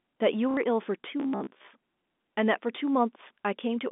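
Around 0.51 to 0.57 s there's packet loss with the last packet repeated. About 60 ms of the sound went missing, which fits a couple of lost packets, and the receiver looped the last one to fill the hole. You get a quick robotic stutter.

From 1.2 to 1.71 s the speech turns into a rigid metallic buzz at about 67 Hz that still roughly tracks it. That's robotic sound from repeated short buffers, likely from audio arriving too rarely, so a roughly 15 ms buffer gets replayed over most of that stretch. All of this sits on a narrow telephone band, roughly 200 Hz to 3.6 kHz, from the G.711 coding.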